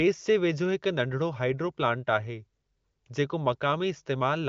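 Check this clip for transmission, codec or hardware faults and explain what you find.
No faults can be heard: the speech comes through an AMR wideband (HD Voice) path whose quality fits the codec's highest rate, and its band stops near 7.3 kHz, as that codec's design dictates, with any coding trace faint at most.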